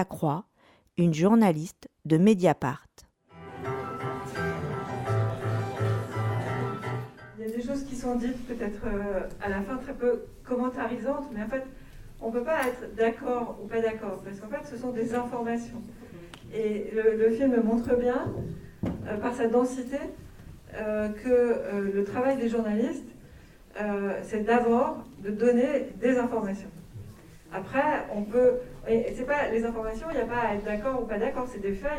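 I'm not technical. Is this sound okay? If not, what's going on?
Yes, it's fine; nothing here sounds wrong.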